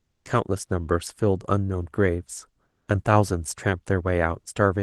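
Comfort noise in place of the background at 0.00–0.25 s and 2.65–2.87 s in this speech clip: each pause's quiet room tone, about 53 dB below the loud parts, becomes steady, featureless hiss, shifting about 2 dB the second time, likely from the call codec's discontinuous transmission.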